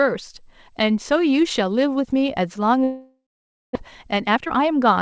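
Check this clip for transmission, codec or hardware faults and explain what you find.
Two transmission faults are audible in the speech. Both come from the network side of a call path. That path has nothing above 8 kHz, which fits a wideband codec such as G.722.

Long network dropout, from 2.84 to 3.77 s. The likely cause is a long network dropout. For this stretch no fresh audio seems to arrive. The receiver extends the last sound as a fading buzz. Then about 0.54 s of near-silence follows. When the speech returns, roughly 0.6 s of it is gone. The delay also appears to shift by around a third of a second.

Jitter buffer speed-up, from 4.03 to 4.93 s. After the gap, the buffer holds more audio than it needs. The receiver trims small pitch-period pieces again and again to catch up. About a fifth of a second is cut in total. The speech plays at roughly 119% speed with its pitch unchanged. 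It sounds hurried.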